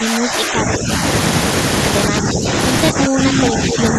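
From 0.0 to 0.9 s, 2.1 to 2.51 s and 2.92 to 3.98 s, the speech dips by roughly 10 dB. This is likely speech suppressed in double talk, with the echo canceller ducking its own talker along with the echo. From 3.3 to 3.35 s, a brief copy of the voice returns 233 ms late, a little below the speech. This is likely an echo leak from a loudspeaker.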